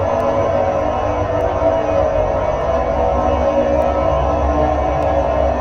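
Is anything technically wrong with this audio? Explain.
Yes. From 0.20 s to 5.03 s the everyday sound carries word clock ticks, about ten sharp clicks of uneven strength at a steady rate of roughly one every 0.7 s. The receiving device was not locked to the sender's clock, and a mismatch of around 30 parts per million makes the two clocks slip past each other, so one sample is dropped or repeated at each slip. A spectrogram shows thin, evenly spaced vertical broadband lines, and a waveform shows single-sample steps.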